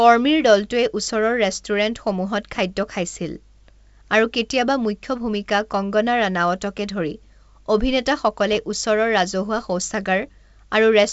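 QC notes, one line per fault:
8.52–8.56 s, bit errors on an ADPCM link: a short rough crackle with a brief change in level, lasting about 40 ms. Flipped bits in the G.722 wideband stream, at a low error rate spread over what sounds like a few consecutive frames, knock the decoder's step size and predictor off track, so each error smears into a burst that rings on until the adaptation settles back.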